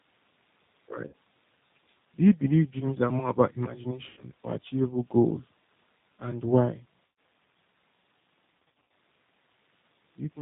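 Throughout the clip the speech sounds dull, slightly rough and synthetic, with nothing above 4 kHz. This is plainly audible G.729 codec damage: at 8 kbit/s the coder rebuilds each 10 ms frame from a vocal tract filter, a pitch estimate and a few pulses, not from the real waveform.

At 1.07 to 1.14 s, 4.09 to 4.22 s and 7.06 to 7.18 s, the sound is stretched into a buzzy tone or coloured noise that fades, followed by a weak, distorted recovery. This is VoIP packet loss concealed by the speech codec, with about 60, 80 and 120 ms of audio lost. The decoder repeats its last pitch and filter settings at falling gain. At 8.69 to 8.85 s the losses total 200 ms, scattered over 320 ms with runs of up to 80 ms, so the concealment artefacts come in quick succession.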